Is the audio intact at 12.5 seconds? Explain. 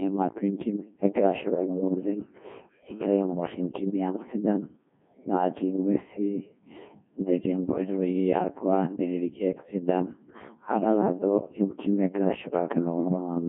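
No. The speech at 12.5 s, like the whole clip, has been through the Codec 2 vocoder. Instead of keeping the waveform, it transmits only pitch, voicing, energy and a coarse spectral envelope, and the decoder rebuilds the voice from sine waves. The heavy damage fits a very low rate near 1.2 kbit/s. The result sounds robotic and buzzy, confined to about 150 Hz to 3.6 kHz, with nothing above 3.7 kHz.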